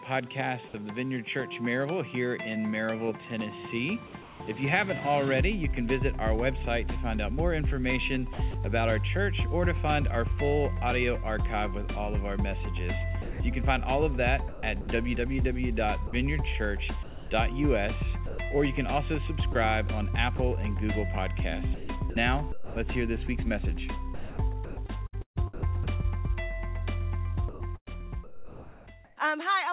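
From 4.22 to 4.4 s, discontinuous transmission likely paused sending, and the receiver filled the gap with comfort noise in place of the background. For 180 ms the real background, about 20 dB below the loud passages, becomes a steady, featureless hiss about 3 dB quieter.

The sender's voice detector likely toggled transmission on and off repeatedly, so the sound is chopped by the voice detector at 8.33–8.54 s (90 ms replaced), 13.22–20.39 s (900 ms), 21.74–22.76 s (450 ms), 24.14–25.87 s (705 ms) and 27.49–29.17 s (980 ms). Quiet edges vanish into synthetic noise, making the sound choppy. Nothing is heard above 4 kHz, which fits a G.711 call codec.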